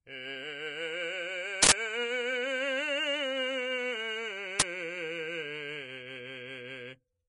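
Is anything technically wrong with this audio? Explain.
Yes, there are two problems. Across the whole music clip there's a hissy, grainy treble with nothing above 10.6 kHz. That's likely Vorbis compression at a low bitrate (around 32 kbps), where the coarsely quantised top end turns into noise.

There are also two uninitialised buffer bursts, loud digital noise at 1.63–1.72 s and 4.60–4.62 s. Leftover memory got played as audio, which fits blocks of 4096 and 1024 samples.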